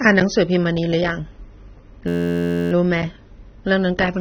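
Throughout, the speech sounds dull and smeared, with nothing above about 6.3 kHz, likely from AAC compression at a low bitrate around 24 kbps. From 2.08 to 2.72 s a steady 86.1 Hz buzz replaces the sound: a system hang loop repeating one 11.61 ms slice, which fits a 512-sample buffer.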